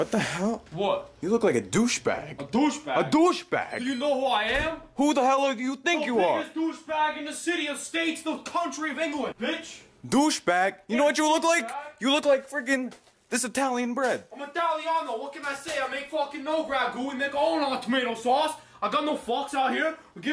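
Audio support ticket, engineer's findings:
No faults found on listening; nothing to report.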